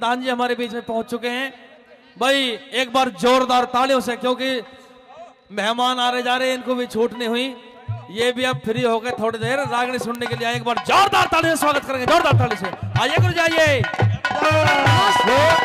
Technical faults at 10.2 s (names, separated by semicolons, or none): bit error spike